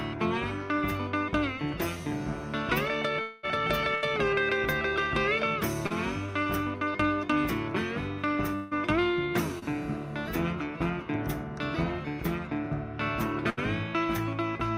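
At 3.21 s the audio goes to a held, fading buzz or hiss for about 0.22 s, to 3.45 s, and then picks up again a little further on. That's most likely a long network dropout: nothing arrived for that stretch, so the receiver kept stretching out the last sound it had. The whole gap gets filled that way, with no dead silence, but roughly 220 ms of real audio is simply gone.

Just after, from 3.95 to 4.05 s, there's a burst of packet loss. About 80 ms went missing, and the receiver papered over it by continuing the previous sound and turning it down. You hear a short held buzz or hiss that fades, and then the audio jumps ahead past the lost bit.

At 5.87 to 5.92 s there's a short concealed packet loss. About 40 ms didn't reach the decoder in time, and the receiver filled it from the preceding sound and blended back in. It's just a quick wobble or smear.

At 8.55 s comes the second stretch, again most likely a long network dropout. 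It runs to 8.73 s, about 160 ms. It's filled the whole way with a fading continuation of the last sound rather than silence, and then it skips ahead.

At 9.59 to 9.64 s there's another short concealed packet loss. Only about 20 ms is missing here, so what you hear is a brief blur.

Finally, at 13.50 to 13.59 s, there's a second burst of packet loss. About 80 ms is lost, and it has the same held-then-fading buzz or hiss before the audio resumes further along.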